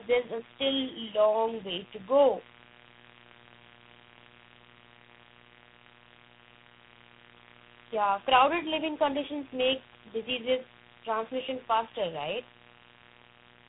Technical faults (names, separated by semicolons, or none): mains buzz; tandem speech coding